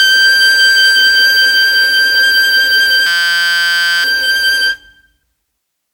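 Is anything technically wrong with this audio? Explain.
Yes, there are two problems in this music clip.

The first is generation loss, and it runs the whole way through. The music sounds swirly and hollow, with a smeared, watery top end and transients that lose their edge. There's nothing above about 20.1 kHz. The likely cause is the track being decoded and re-encoded something like fifteen times with an old WMA-style codec, at a rate that sounds around 96 kbit/s. Each pass quantises again on a shifted frame grid, so the damage keeps piling up.

The second is a system hang loop from 3.07 to 4.04 s. The music suddenly turns into a steady buzz pitched at about 172 Hz. What's happening is that the machine froze while the audio hardware kept replaying the same 5.8 ms slice of its ring buffer, which fits a 256-sample buffer. It repeats so quickly that you hear a tone instead of a stutter, and about a second of real music is lost underneath it.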